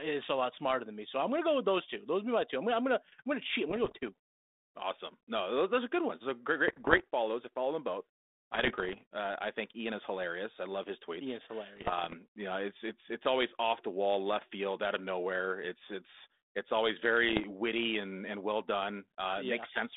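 Bit errors on an ADPCM link hit this telephone-band speech at 3.69–4.09, 6.68–7.04, 8.53–9.01, 11.76–12.15 and 17.29–17.44 s. Stray flipped bits, under one percent, derail the decoder's step size and predictor, producing pops, rough bursts and brief level jumps.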